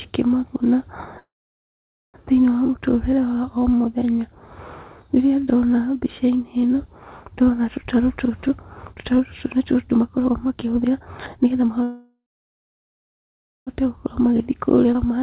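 At 1.19 s the speech stalls, and it does not resume until 2.17 s. This is a call audio freeze. The likely cause is packets held up in transit, leaving the jitter buffer empty. The last sound is stretched into a brief fading tail, and then there is about 0.86 s of silence. When the audio returns, it picks up exactly where it stopped. Nothing is lost, but the speech now runs nearly a second late.

From 7.81 s to 11.82 s comes a jitter buffer speed-up. The buffer is holding too much audio, so the receiver trims short pitch-period slices, again and again. Playback runs at about 120 percent while the pitch stays put. Roughly 0.7 s is removed, and the speech sounds hurried.

At 11.83 s a second freeze begins and lasts until 13.70 s. It follows the same pattern and has the same likely cause. A short fading tail gives way to nearly 1.5 s of silence, and then the speech resumes without loss, now about 1.8 s further behind.

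A milder speed-up runs from 13.85 s to 15.21 s at about 112 percent. It removes around 0.15 s and sounds slightly rushed.

Inside that stretch, at 14.94 to 14.98 s, the audio skips ahead. Roughly 0.7 s of speech is dropped, and the two sides are joined almost directly. The result is an abrupt jump forward, and the content in between is missing.

Throughout the clip, nothing sits above 4 kHz, which fits a narrowband call codec such as G.711.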